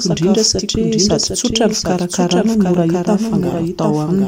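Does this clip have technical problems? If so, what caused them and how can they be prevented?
Yes. A doubled audio track runs through the whole clip, most likely because the same speech was captured a second time over a slower path, or an edit left two copies out of step, and both were mixed together. The result is a second full-band copy trailing roughly 0.7 s behind the original and about 5 dB quieter. It carries no decay or room colour, so it sounds like a dry, overlapping repeat rather than an echo. To prevent it, route each source into the mix only once and check edits for leftover duplicate regions.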